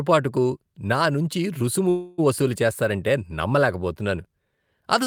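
A call audio freeze runs from 1.89 s to 2.2 s, just after "నా నుంచి రుసుము". The speech stops moving forward and the last sound is stretched out as a fading buzz for about 286 ms, with no stretch of true silence. The likely cause is packets stalling in transit until the jitter buffer emptied, so the receiver filled the wait. When the speech resumes, it picks up exactly where it halted, with nothing skipped, but everything afterward now arrives 286 ms later.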